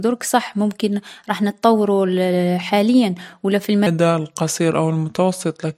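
From 3.87 s, just after "حاليا و لا في", a section at the wrong speed runs at 0.82x to the end, dropping pitch about four semitones, likely from a clock mismatch; spectrogram harmonics shift lower and spread in time.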